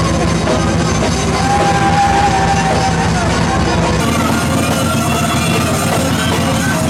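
From 4.00 s to the end there's a section at the wrong speed, running 1.37 times too fast, sounding hurried and about five semitones sharp, likely from a mismatched clock.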